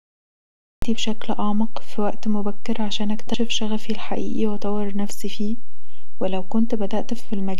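From the first sample to the last, the speech sits on a DC offset: the whole waveform rides on a constant shift away from zero. It can't be heard as a tone, which separates it from hum, but it eats headroom and shows as a steady component at 0 Hz rather than at 50 or 60 Hz.

The opening is a cut-off start. Digital silence runs until 0.82 s, and then the audio jumps straight into the middle of a sound at "بشكل اعمق في وقت" with no attack or fade-in. The capture evidently began late. Unlike a dropout, nothing came before the gap, so no earlier sound is interrupted.

At 3.34 s, after "في وقت مبكر عشان" and before "شغفي الحقيقي واذور نفسي", there is a brief blip from damaged data in a compressed stream. Corrupted bytes made the decoder misread a frame and resynchronise at the next header. The result is a brief glitch where the decoder loses its place.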